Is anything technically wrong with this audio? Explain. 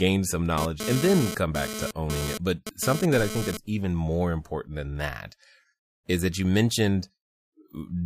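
Yes, there's GSM phone buzz from 0.58 to 3.57 s, ending just before "even more important than". A nearby 2G phone's 217 Hz transmit bursts got rectified in the audio circuit, giving a hard, raspy, harmonic-rich buzz about 7 dB below the speech that comes and goes with data traffic.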